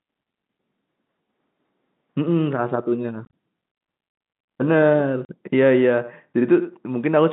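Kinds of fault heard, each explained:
Packet loss filled with silence: the speech is chopped by sudden holes with hard edges. Near 3.25 s about 60 ms goes missing in several pieces spread over 80 ms, the longest lasting 30 ms. At 5.25 s a single 40 ms gap opens. Stretches of the telephone stream never arrived and the receiver played silence instead. Hole lengths that step in 10 ms units fit 10 ms packets.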